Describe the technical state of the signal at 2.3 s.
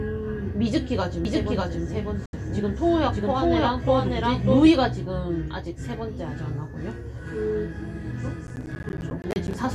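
At 2.3 s the signal is in a digital broadcast dropout, from 2.26 to 2.33 s. The receiver lost valid frames and muted, fading out within about 3 ms, so roughly 72 ms of sound is gone, which fits about three lost frames. The waveform shows a flat gap, and the spectrogram shows a blank vertical band across all frequencies.

The same moment sits inside a doubled audio track running from 1.25 to 4.69 s. A full-band second copy trails the original by roughly 0.7 s at about equal level, likely from a slower capture path or misaligned edit. The waveform shows repeated shapes offset by that lag, and the copy starts and stops abruptly.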